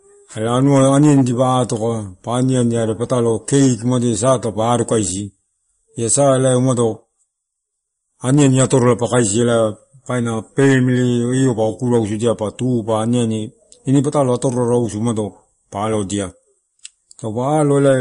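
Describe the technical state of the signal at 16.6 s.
At 16.6 s you're hearing the same thing that runs through the whole speech clip: damage from what's likely MP3 compression, and it's plainly audible. There's nothing at all above 10.6 kHz, because the encoder cut the treble off at a fixed point to save bits. It's also dropping weak frequency lines that flicker on and off frame to frame, giving that watery, swirly texture and chirpy sibilants. All of that points to a low bitrate of around 40 kbps.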